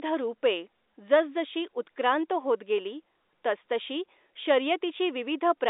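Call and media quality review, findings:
Nothing to flag here; the speech comes over an ordinary G.711 A-law phone line at 64 kbps, with the usual telephone band of roughly 300 Hz to 3.7 kHz.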